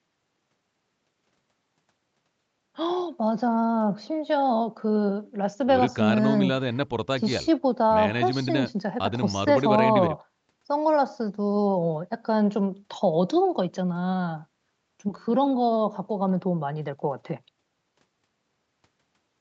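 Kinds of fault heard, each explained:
No faults detected in this speech; the call microphone processing's bass roll-off and the absence of content above 8 kHz are expected for that path.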